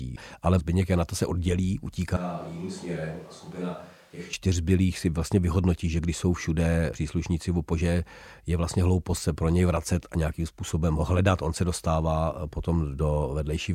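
After "to se oddělí", from 2.17 to 4.33 s, the speech abruptly turns hollow, thin, roughly 10 dB quieter and noisier, likely from a switch to a distant microphone.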